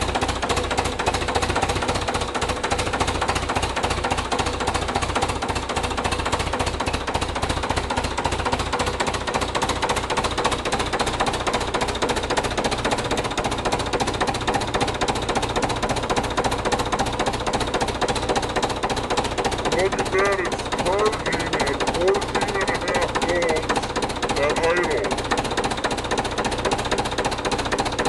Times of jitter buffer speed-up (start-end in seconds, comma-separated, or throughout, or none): none